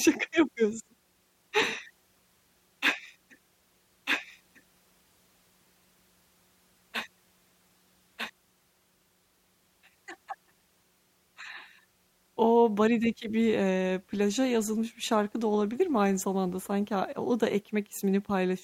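From 4.1 s to 8.3 s the speech is doubled: a second full-band copy runs about one and a half seconds behind the first, at roughly the same level, so two overlapping streams compete for attention. The copy carries no reverberant tail or room colouring, and it cuts in and out abruptly at those boundaries. This is a doubled audio track, likely from the signal being captured again through a slower path, or from an edit leaving two offset copies in the mix.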